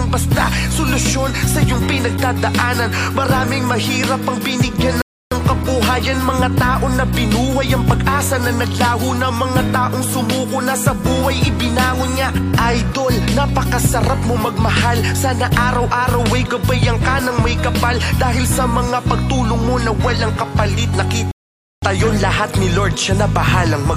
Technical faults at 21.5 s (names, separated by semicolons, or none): computer activity noise; rebuffering stall